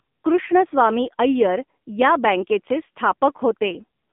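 From start to finish the speech sounds thin, boxed-in and buzzy, with a synthetic edge: nothing reaches above about 3.7 kHz, and the usable band sits roughly between 200 Hz and 3.6 kHz. This is AMR narrowband mobile codec damage. The phone codec rebuilds the voice from a vocal-tract model excited by sparse pulses, and the plainly audible roughness points to one of its lower bitrates, around 7.4 kbps.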